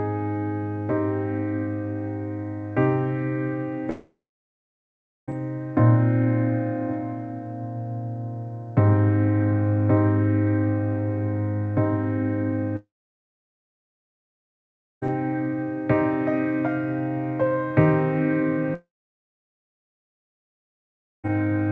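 Long network dropouts at 3.90 to 5.30 s, 12.76 to 15.04 s and 18.74 to 21.26 s each sound like the audio briefly continuing as a fading buzz, then falling to silence for about 1.1, 2.2 and 2.4 s before resuming further on with that stretch simply gone. The likely cause is packets failing to arrive, so the receiver concealed the gap and then gave up. Nothing above 8 kHz is heard, consistent with a G.722 call path.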